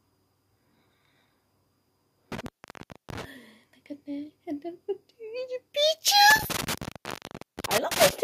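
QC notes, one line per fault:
2.32 to 3.24 s and 6.30 to 8.10 s, intermittent contact: a loose plug or cable connection briefly breaks, so the audio drops out for about 0.64 s and then about 0.75 s, with crackle as the contact scrapes open and shut and faint hiss in the gap.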